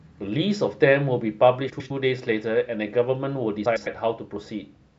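This speech clip has frames out of order twice: two adjacent blocks of about 105 ms each were decoded in swapped sequence, consistent with runs of four frames. From 1.69 to 1.91 s and from 3.65 to 3.87 s the halves play exchanged, producing a garbled flutter, while no time is lost.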